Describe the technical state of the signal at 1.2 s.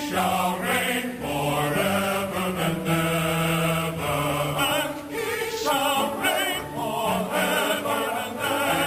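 A hiss and grainy roughness ride on the audio at 1.2 s, growing with louder and brighter passages and dropping away where the signal falls quiet. This is sample clock jitter, present throughout the clip rather than just at this moment. The converter's clock wanders by a couple of microseconds, so each sample lands slightly off time, and steep waveform slopes turn that timing error into noise roughly 30 dB below the signal.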